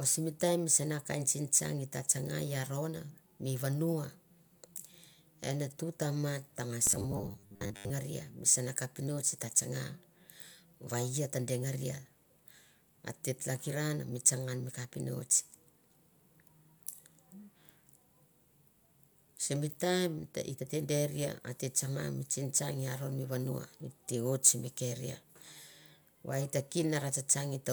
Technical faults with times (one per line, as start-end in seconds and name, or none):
6.85-7.90 robotic sound from repeated short buffers